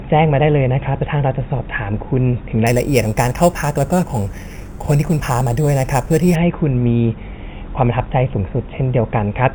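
Speech, with imaging from sample-and-hold upsampling between 2.67 and 6.35 s: a metallic fizz from mirrored spectrum copies at 4 to 8 kHz, about 19 dB down, which fits 8 kHz samples simply repeated up to 44.1 kHz with no smoothing.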